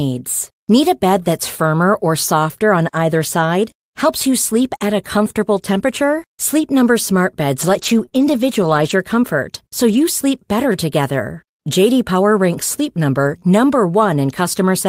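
At 5.77 s, and again from 7.61 to 8.03 s, lost packets were rebuilt from error correction: low-bitrate copies fill the gaps, so the speech sounds rougher and noisier there. Short concealed packet loss follows at 8.05 to 8.09 s and 8.09 to 8.13 s, where the decoder extends the preceding sound to bridge about 20 ms of missing audio each time, giving a brief smear. More rebuilt stretches follow at 8.13 to 8.43 s, 8.61 to 8.91 s and 9.87 to 9.97 s. From 10.72 to 10.74 s a repeated buffer plays one 5.33 ms piece five times, which fits a 256-sample buffer and is heard as a brief buzz. Error-correction rebuilding returns at 13.23 to 13.37 s, then concealed loss at 13.39 to 13.43 s.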